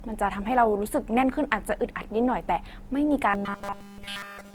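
From the start the speech has a swirly, smeared and hollow quality, with consonant attacks blurred. This is generation loss, likely from the audio being decoded and re-encoded around four times with Opus, at a rate consistent with 48 kbit/s. Each pass requantises on a shifted frame grid, so noise and spectral holes accumulate beyond what that bitrate alone would produce.

From 3.30 s to the end, the speech turns into a rigid, metallic buzz at 200 Hz that only loosely tracks the speech. This is robotic sound from repeated short buffers. The likely mechanism is that fresh audio stopped arriving in time, and the playback path filled the gap by looping the last fragment, which fits a 5 ms buffer, with essentially all of the real signal skipped.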